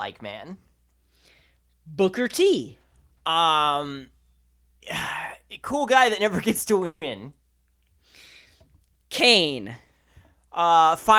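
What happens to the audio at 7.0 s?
A call audio freeze runs from 6.85 to 7.04 s. The last sound is stretched into a fading buzz or hiss for about 160 ms, likely from delayed packets draining the jitter buffer. The audio then resumes where it stopped, nothing lost, just shifted 160 ms later.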